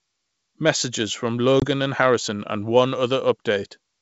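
At 1.60 s a packet loss on the ADPCM call cuts a hard-edged 20 ms hole of silence, roughly one packet. The G.722 decoder's predictor and step size lose track, so speech resumes slightly distorted until about 1.66 s. A spectrogram shows a blank vertical gap.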